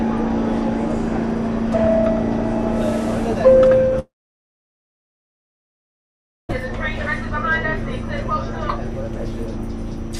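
This everyday-sound recording has a long network dropout from 3.99 to 6.51 s: the last sound briefly smears into a fading buzz or hiss, then about 2.4 s of silence, likely lost packets.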